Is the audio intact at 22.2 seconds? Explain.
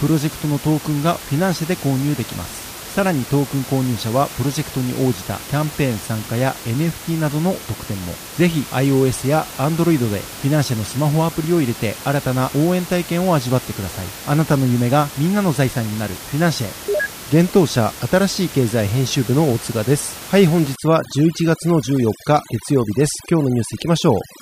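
No. Overdone noise removal runs from 20.76 s to the end at 24.41 s, gating bands near the estimated noise floor. The background drops and breaks up into twinkling, warbling specks, and the spectrogram shows holes and scattered isolated specks.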